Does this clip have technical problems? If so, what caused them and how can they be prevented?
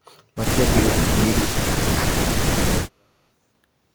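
Yes. The speech drops out in three stretches, from 1.09 to 1.63 s, 1.79 to 2.15 s and 2.37 to 3.16 s, sinking by roughly 35 to 40 dB at its deepest. This is likely speech suppressed in double talk: with both sides talking at once, the echo canceller could not tell this talker from loudspeaker echo and attenuated both. Prevention: use a canceller with proper double-talk detection and gentler residual-echo suppression, or headsets.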